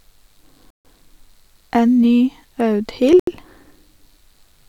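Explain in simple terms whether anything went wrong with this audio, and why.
A likely Bluetooth stall, where the wireless link held up audio, briefly cuts the speech to silence at 0.70 to 0.85 s and 3.20 to 3.27 s.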